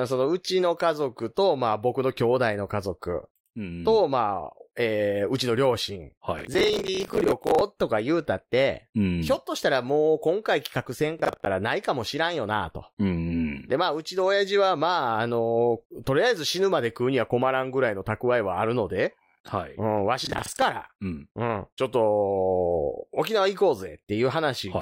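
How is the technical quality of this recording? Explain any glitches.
The speech is marred by three bursts of processor overload crackle, at 6.39 to 7.61 s, 11.20 to 11.46 s and 20.25 to 20.62 s. Each sounds like a gritty, tearing crackle laid over the voice, longest and densest in the first burst. The cause is a processor falling behind on very short buffers, around 10 ms each, so that dozens of deadlines pass unmet in a row. Each miss repeats a scrap of stale audio with hard edges, and those stacked discontinuities make the crackle until the load eases.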